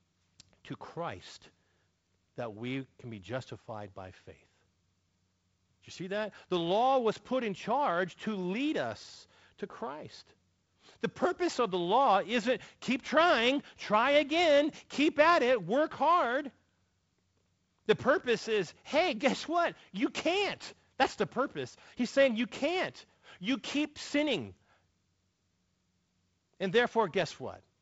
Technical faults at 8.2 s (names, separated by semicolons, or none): none